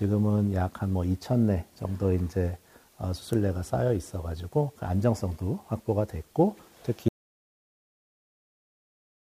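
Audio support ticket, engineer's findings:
Audio dropout to silence at 7.08 s, running to end of file. Sound cuts off mid-flow, then silence with no room tone or noise floor. Likely cause: input lost upstream of the recorder, such as a disconnected device, a failed link or a stray mute, while capture kept writing samples. Content after 7.08 s is unrecoverable.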